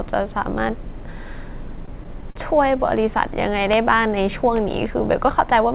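From 1.68 to 2.37 s the speech shows repeated stalls, a stutter. Packets arrived late, so the jitter buffer ran dry seven times, and each time the receiver extended the last sound until data came in. The longest wait was 49 ms, and the fill adds up to 114 ms, about a sixth of that stretch. Unlike packet loss, no speech is missing: it drags and hiccups rather than skipping. The narrow band with nothing above 4 kHz comes from the G.711 call path.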